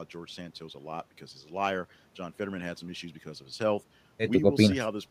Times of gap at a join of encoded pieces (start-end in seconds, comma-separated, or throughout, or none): none